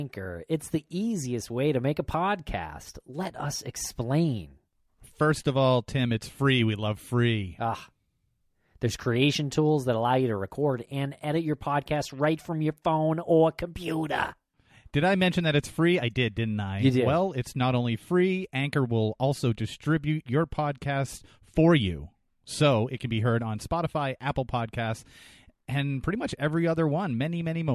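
A speech recording, and there's nothing technically wrong to point to here, with no faults to flag at any point in it.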